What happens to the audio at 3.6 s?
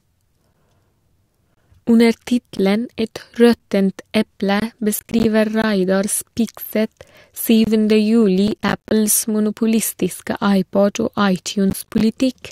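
At 3.59 s the speech drops out for a brief, hard-edged hole of about 9 ms, heard as a tiny click-like break. It is a gap between stream segments: the timestamps of two 1.0 s segments leave a small space, which playback fills with silence.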